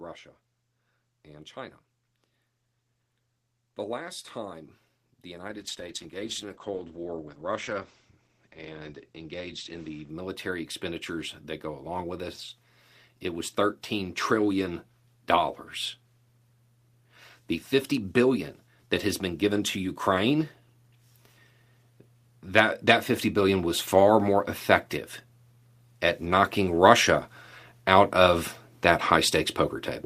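From 3.61 s the automatic gain rises slowly right up to 29.38 s, lifting the voice and the background together by about 22 dB as the control chases a quiet input. Between 5.5 and 10.15 s there's a call bitrate drop: the top end closes from 12 kHz to 8 kHz and the voice turns rough and watery, which fits an Opus stream falling from roughly 32 to 12 kbps.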